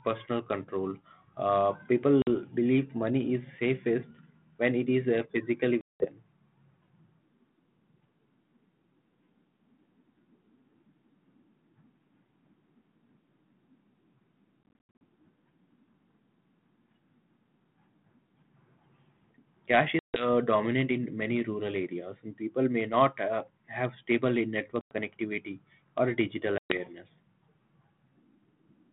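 Packet loss on an ADPCM call punches hard-edged silent holes at 2.22 s (50 ms, before "believe money is safest"), 5.81 to 6.08 s (after "it is uh physically"), 14.63 to 15.01 s (scattered gaps totalling 240 ms), 19.99 to 20.28 s, 24.81 to 24.92 s and 26.58 to 26.78 s (after "connectivity or digital"). Unlike a plain dropout, each hole is followed by slightly distorted speech for some tens of milliseconds while the decoder's predictor and step size fall back into step with the sender.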